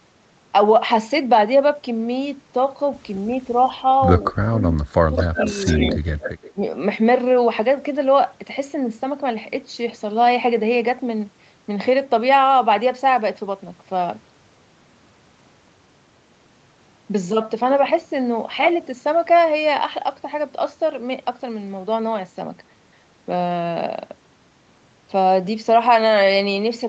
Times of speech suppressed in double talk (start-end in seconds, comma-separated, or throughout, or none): 3.44-3.60, 4.32-5.41, 5.93-6.02, 6.53-6.64